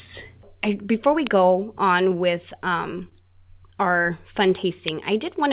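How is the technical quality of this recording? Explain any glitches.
Two kinds of glitch show up in this call-path speech, which is band-limited to 4 kHz the way G.711 A-law audio is.

At 1.27 s and 4.88 s there's an uninitialised buffer: a block played out before audio was written, so stale memory came out as a loud digital snap. They last about 0.73 ms and 1.45 ms, which fits 32- and 64-sample buffers.

Around 3.09 to 3.14 s there's a short stall from a late packet: the jitter buffer ran dry and held the last sound about 25 ms, so it briefly drags with a faint buzz or dip, but nothing's lost.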